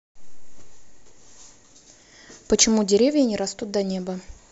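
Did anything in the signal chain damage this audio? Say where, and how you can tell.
No, nothing in the signal chain audibly damaged this speech.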